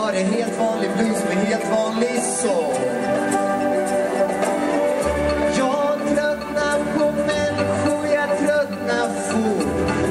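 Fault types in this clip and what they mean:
8-bit audio: the sound is stored with only 8 bits per sample and no dither, so a grainy rounding noise sits some 40 to 50 dB under the loudest peaks, and the very quietest sounds turn gritty or drop out.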